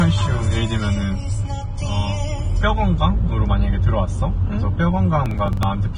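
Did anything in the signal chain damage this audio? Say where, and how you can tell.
Yes. At the codec stage, the whole clip sounds hissy and grainy, with nothing above about 9.7 kHz and smeared attacks. That is likely heavy Vorbis compression at a low rate, which fits something near 22 kbps. The treble gets quantised so coarsely it turns to noise.

At the driver or buffer stage, there's a processor overload crackle from 5.26 to 5.63 s, a gritty tearing over the sound. It sounds like around ten buffers of roughly 10 ms each were missed and skipped outright, and every skip leaves a hard-edged gap.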